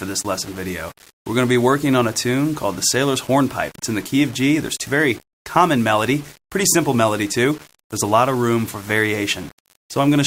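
Throughout, the audio carries a coarse, grainy distortion that rises and falls with the sound, sitting only roughly 25 dB below it. This is low bit depth without dither, likely rounding to about 6 bits. Unlike steady hiss, the grit tracks the signal. At 4.85 s a skip ahead drops roughly 0.7 s of audio and splices both sides directly, with no silent gap as a dropout would leave. From 4.94 to 10.15 s, a jitter buffer speed-up trims short pitch-period pieces, about 0.3 s in total. The sound runs about 6% fast and hurried, with pitch unchanged.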